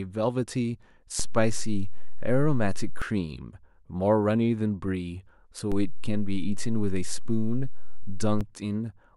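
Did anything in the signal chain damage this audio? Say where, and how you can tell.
Yes. A DC step at the converter or analogue input shifts the waveform's zero line by about -21 dBFS from 1.20 to 3.02 s, and by about -22 dBFS from 5.72 to 8.41 s. Each edge gives a low thump while the speech continues. On a waveform the baseline visibly jumps; a spectrogram shows brief broadband vertical lines at each edge.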